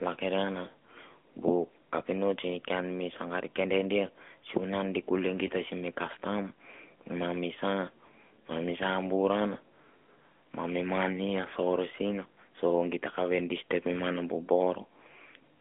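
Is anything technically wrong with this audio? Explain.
Yes. Throughout, the speech carries AMR narrowband mobile codec damage: sampled at 8 kHz and band-limited to 200 Hz to 3.4 kHz, its vocal-tract modelling at a mid-rate mode near 10 kbps leaves a plainly buzzy, synthetic quality.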